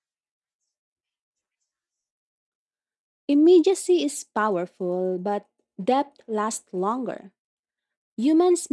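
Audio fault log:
Nothing stood out on listening to this speech recording.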